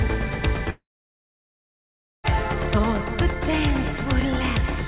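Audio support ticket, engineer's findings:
Gap from 0.7 to 2.26 s, likely a long network dropout. The receiver smears the last sound into a brief fading buzz, then about 1.4 s of near-silence, and the audio picks up with about 1.5 s just gone. Top end stops at 4 kHz throughout, which fits G.711 mu-law.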